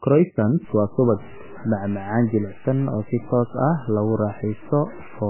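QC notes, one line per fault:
Throughout, MP3 compression: the speech sounds dull and watery, with nothing above about 3 kHz, so s sounds lose their hiss and turn into a smeared, swirling wash, and word onsets blur. This is likely a heavily starved MP3 encode, at a rate of around 8 kbps, where the encoder has cut the treble at a fixed point and drops weak frequency lines that flicker in and out from frame to frame.
0.65 to 5.29 s, low bit depth without dither: from 0.65 s to the end the speech carries a gritty, grainy distortion that rises and falls with the voice, sitting roughly 20 dB below it, and the quietest tails crackle or drop out rather than fading smoothly. This points to the signal being cut down to about 6 bits by truncation with no dither, so the rounding error tracks the waveform instead of becoming a steady hiss.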